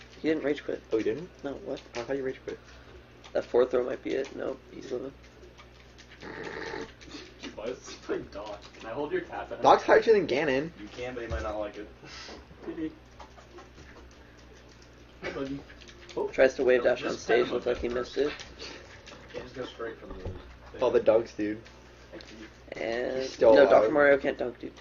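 The audio has four short patches of AAC frame loss with concealment, at 4.83–4.90 s, 7.26–7.32 s, 19.00–19.05 s and 22.76–22.81 s. Each lasts roughly 42.7 ms, which fits one lost AAC frame. The decoder covers each gap by rebuilding sound from the last good spectrum, so it comes out smeared and noisy or phasey rather than silent. On a spectrogram each shows as a narrow vertical band where the fine detail blurs into a noise-like wash. In the waveform the shape turns irregular for that stretch without dropping to zero. Three sharp single clicks, at 11.53 s, 12.40 s and 16.20 s, are likely dropped samples: a tiny fraction of a millisecond goes missing, so the waveform jumps straight from one value to a later one. Far too little is lost to be heard as a gap, only as a tick. Each appears as a thin vertical line running the full height of the spectrogram and as a single step discontinuity in the waveform.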